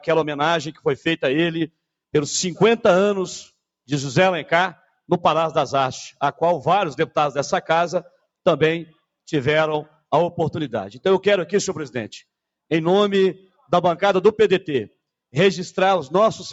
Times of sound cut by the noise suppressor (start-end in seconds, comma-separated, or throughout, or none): 0.73-1.06